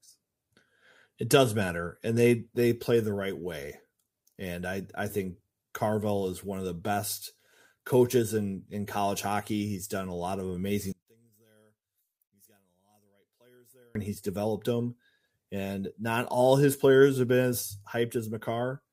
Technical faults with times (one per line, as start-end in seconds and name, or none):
10.92-13.95 one channel inverted